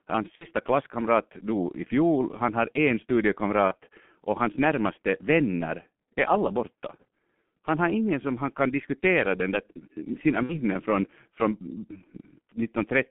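Throughout the speech, the G.723.1 codec squeezes the signal into a 150 Hz to 3.4 kHz line band at a rate consistent with about 6 kbit/s, with heavy coding damage. Its slowly updated voice model leaves the sound muffled and hoarse, consonants smeared.

VoIP packet loss concealed by the speech codec occurs at 0.35–0.47 s, 3.68–3.75 s and 10.43–10.60 s. The decoder patches missing audio, about 60 ms in the first and last cases (consistent with two lost 30 ms frames) and about 30 ms in the middle one, by extending its last pitch and filter at falling gain. Each gap turns into a fading buzzy tone or coloured noise, and the speech stays weak or distorted for a moment afterward.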